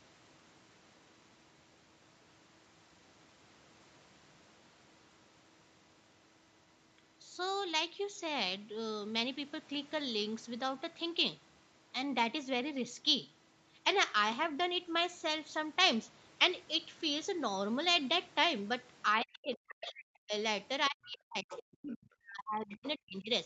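From 19.17 to 20.33 s and again from 20.89 to 23.3 s, the speech is pushed down in double talk. The level falls by as much as roughly 40 dB, about a second in the first span and two in the second. This is likely the echo canceller turning everything down when it can't separate the near talker from loudspeaker echo.

Inside that second span, the other side's voice leaks through, from 21.49 to 21.95 s at roughly 15 dB under the speech and again at 22.71 to 22.89 s at roughly 20 dB under. These faint scraps are likely loudspeaker echo that the canceller left behind in the microphone signal.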